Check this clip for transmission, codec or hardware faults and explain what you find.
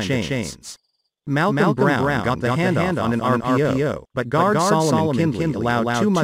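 One fault runs through the whole clip: a doubled audio track. A second, full-band copy trails the original by about a fifth of a second at roughly equal level, likely from a slower capture path or misaligned edit. It sounds like a dry, flat echo; waveforms show every onset repeated, spectrograms show each event twice.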